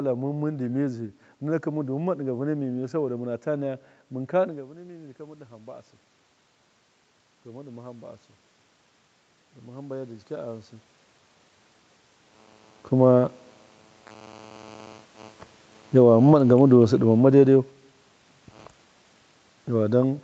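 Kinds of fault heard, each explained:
Automatic gain rising: The gain control judged the speech too quiet and turned it up slowly. From 2.76 to 5.9 s the level climbs by about 4 dB. The lift is spread over about three seconds, so it sounds like a gentle swell, not a jump. The room noise rises along with the voice. The talker also shifts position near 4.5 s, but the steady lift of the background comes from the gain control.
Automatic gain falling: Here the control judged the input too loud, or its background noise too strong, and pulled its gain down. Between 15.82 and 17.71 s the speech sinks by about 4 dB over roughly two seconds. The voice starts out loud and then settles lower. The background noise drops with it at the same rate. That shared fall marks it as a gain change in the processing, not a change in how the talker speaks.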